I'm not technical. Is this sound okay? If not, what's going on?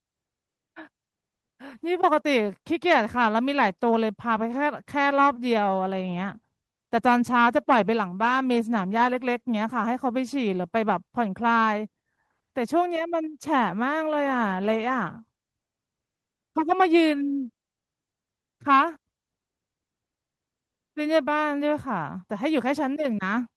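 Yes, nothing has gone wrong with this speech recording. It has been through a normal internet call connection, so the very highest treble above about 12 kHz is trimmed off and there is the coding texture that call audio always carries.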